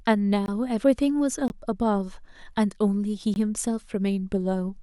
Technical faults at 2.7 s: none

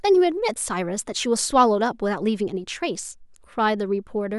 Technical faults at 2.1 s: clock slip clicks

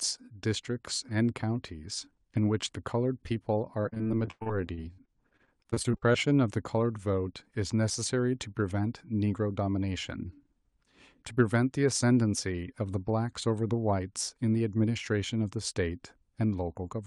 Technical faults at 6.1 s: repeated packet loss (robotic sound)

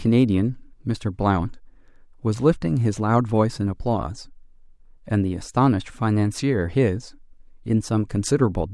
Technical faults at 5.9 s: none

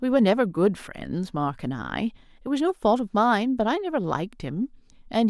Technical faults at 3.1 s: none

